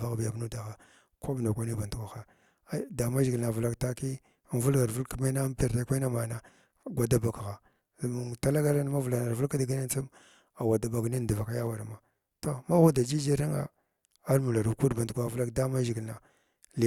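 Nothing in this speech recording stands out as a technical fault, so there's no moment that needs pointing out.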